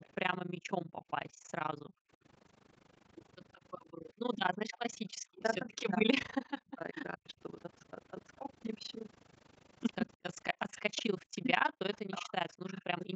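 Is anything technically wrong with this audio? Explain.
Yes, there are four kinds of fault in this speech.

Overlap-add ripple runs throughout: the level swings by about 60 dB at around 30 Hz, a rough tremolo. Frames were rejoined with an overlap that doesn't sum to constant gain. Unlike gating, it never stops and keeps a steady frame-rate rhythm.

Echo leak appears in brief scraps at 0.01 to 0.08 s, 4.71 to 4.78 s and 11.95 to 11.99 s. Each is a faint copy, roughly 20 to 30 dB down, trailing by 185, 189 and 196 ms. The likely cause is a far-end loudspeaker whose echo canceller let some of the signal through. The fixed delay separates it from room reverberation.

Background gated by the echo canceller occurs from 0.45 to 2.18 s, with dips as deep as about 40 dB totalling around a second, and from 3.92 to 5.09 s, reaching about 33 dB over less than half a second. The canceller clamped the microphone while the loudspeaker played, so the room tone drops away and returns.

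Speech suppressed in double talk affects 5.37 to 7.39 s and 10.66 s to the end. Here the voice itself dips by roughly 40 dB, for about one and a half seconds in the first span. This is likely the canceller turning down both its own talker and the loudspeaker echo during simultaneous talk. It targets speech, not background.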